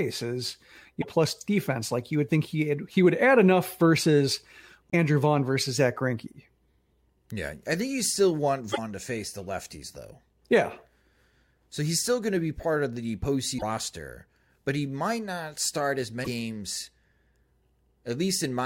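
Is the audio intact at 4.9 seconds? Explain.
No, there's a short break in the speech from about 4.90 to 4.94 s. It sounds like a broken MP3 bit reservoir, most likely frames dropped from the stream. The speech skips forward, and the next frame, which expects part of its data in earlier frames, reads bytes that belong to a different frame. That decodes as roughly 44 ms of chirp, noise burst or short hole, under two frames of about 26 ms each.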